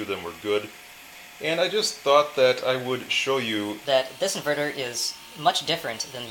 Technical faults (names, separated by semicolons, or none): section at the wrong speed